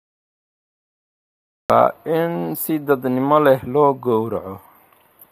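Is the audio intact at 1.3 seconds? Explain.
No. At 1.3 seconds you're still in the cut-off start: from 0 to 1.70 s there's only digital silence, because the recording began late. At 1.70 s the sound comes in mid-stream, right before "in si dadnimo leh", with no natural attack or fade-in.

The channel delay (comb filtering) also runs through the whole clip. One channel lags the other by a tiny offset, roughly 0.07 ms, so when they're summed to mono the shared content cancels at evenly spaced frequencies. The first notch sits around 7 kHz, which leaves the top end hollow and a bit dull.

The clip is also plainly rough and grainy throughout, with noise smeared between the pitch harmonics and a thin, synthetic-sounding top band. That points to low-delay AAC compression, likely AAC-ELD at a low bitrate around 32 kbps, where its short frames can't resolve the harmonics cleanly.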